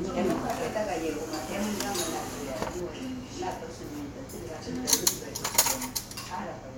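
No technical faults can be heard anywhere in this recording of everyday sounds.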